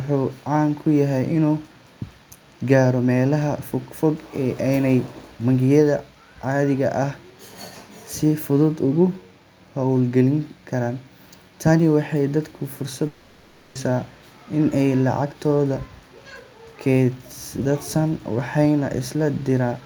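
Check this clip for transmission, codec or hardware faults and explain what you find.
One fault turns up in this speech. From 13.07 to 13.78 s, just after "waxay dadka fursad", a long network dropout likely stopped packets arriving. The receiver filled the whole 0.68 s gap with a fading buzz or hiss, and the lost speech never returns.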